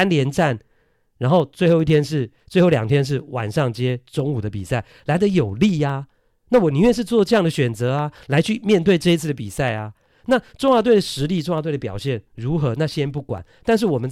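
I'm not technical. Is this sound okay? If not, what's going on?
No. Something in the computer is interrupting the audio connection on a strict schedule, which is called periodic USB or driver dropouts. About every 0.1 seconds, from 0.1 s to 13.98 s, the driver briefly stalls and a tiny sliver of the recording is skipped outright. In this speech, that comes through as a steady ticking, about ten clicks per second, running under the talking for nearly the whole clip.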